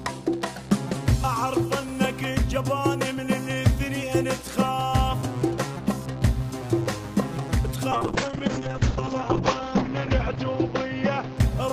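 A call bitrate drop hits at 7.93 s: the encoder is starved of bits, plausibly from around 64 kbps down to 7 kbps, so the audio turns coarse and watery and its top end narrows from 20 kHz to 8 kHz, bottoming out for about 1.9 s.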